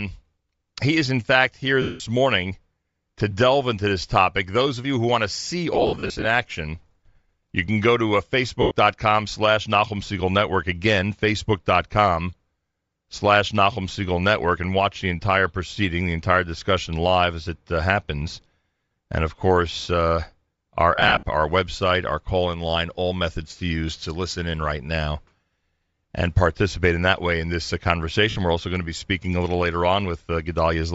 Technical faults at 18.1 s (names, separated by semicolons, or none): Bluetooth LC3 compression